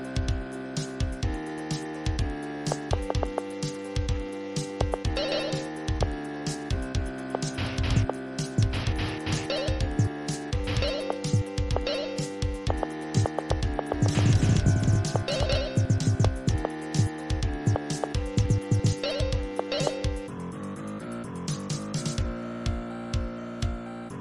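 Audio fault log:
13.93–15.57 s, doubled audio track: for about 1.6 s the sound is heard twice, with a second full-band copy trailing the original by roughly 300 ms and sitting only a few decibels below it, around 5 dB down. The copy has no reverberant tail or room colouring and cuts in and out abruptly at both ends. This is likely a second, slower capture path or an edit leaving two out-of-step copies mixed together.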